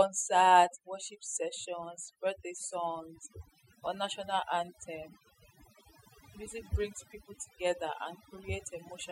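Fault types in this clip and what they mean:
overdone noise removal: noise reduction set too aggressively mutes frequency bands near the noise estimate, leaving a lowered background that breaks up into twinkling specks throughout.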